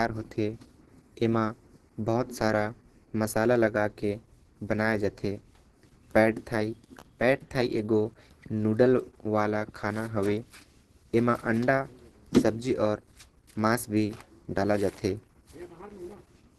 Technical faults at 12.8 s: Opus compression

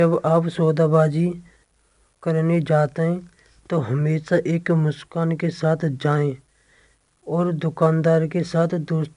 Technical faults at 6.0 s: 4-bit ADPCM compression

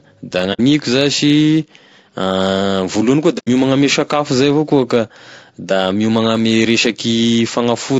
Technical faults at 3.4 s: low-delay AAC compression; AAC frame loss with muting

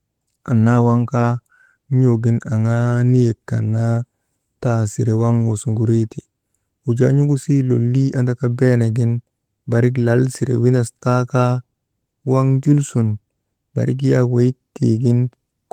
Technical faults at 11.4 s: none

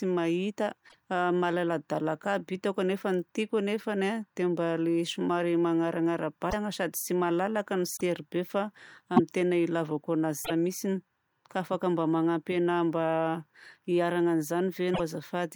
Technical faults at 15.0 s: broken MP3 bit reservoir

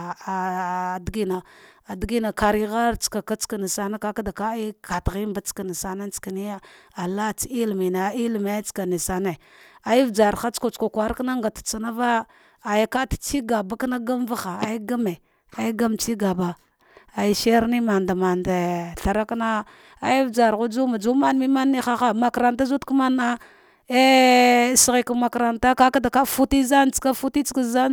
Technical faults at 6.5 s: none

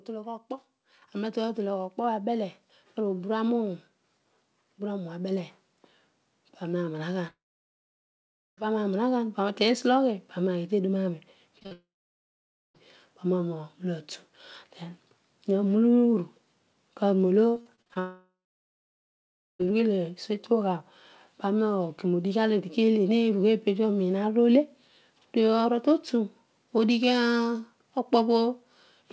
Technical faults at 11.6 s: short concealed packet loss

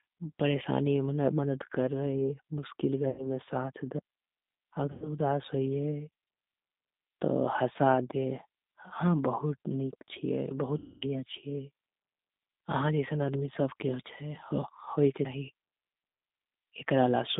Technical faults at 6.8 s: G.729 codec

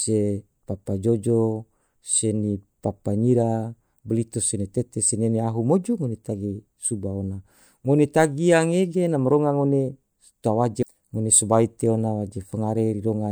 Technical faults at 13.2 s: none

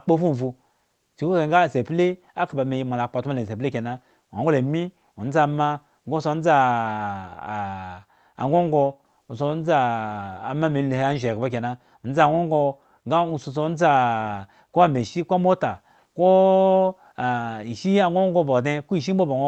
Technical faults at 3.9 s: none

